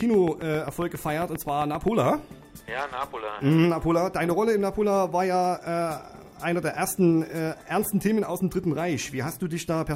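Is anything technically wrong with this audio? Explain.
Yes. From 0.01 to 1.89 s, a train of clicks: about fifteen near-identical pops at a steady 7.5 per second, likely interference, unlike random crackle.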